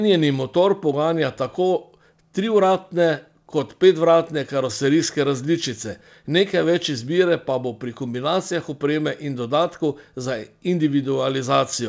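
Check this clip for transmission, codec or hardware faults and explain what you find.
Nothing in the speech points to a fault, and the call path is behaving as intended, with the audio carrying nothing above 8 kHz in a way that fits a wideband G.722 link.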